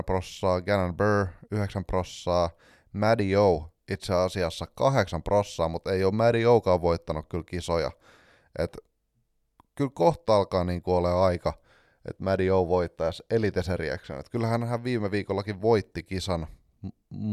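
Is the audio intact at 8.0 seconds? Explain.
Yes, the audio at 8.0 seconds is intact, with no dropout, click, distortion or other fault to be heard there.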